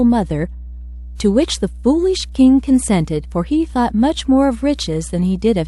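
A ground loop or a transformer sitting close to the signal path has let the 60 Hz power line leak into this speech recording, and the result is mains hum running the whole length of the clip. It is a steady low drone at 60 Hz, with some low harmonics stacked above it, sitting roughly 15 dB below the speech.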